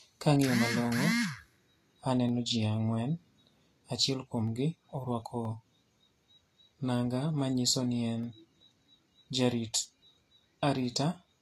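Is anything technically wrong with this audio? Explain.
Yes, there are two problems in this speech clip.

Throughout, the audio is most likely low-bitrate audio saved at a high bitrate. The smeared, watery texture of a heavy lossy encode remains. That points to a Vorbis source at around 33 kbit/s later re-saved as MP3 at 256 kbit/s. The second encode keeps those losses rather than adding new damage, which is what separates this from a file that was simply encoded badly once.

At 1.11, 2.29 (just before "ji ang'wen"), 4.48, 5.45, 8.24 (just after "nanga manyiso ni en") and 9.85 s, single sharp clicks are heard. Each is likely dropped samples: a fraction of a millisecond goes missing, so the waveform jumps abruptly. Each shows as a thin vertical line across the spectrum. No sound is audibly lost, which distinguishes it from a dropout or a skipped buffer.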